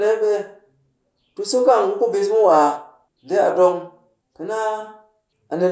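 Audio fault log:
No technical faults can be heard anywhere in the speech signal.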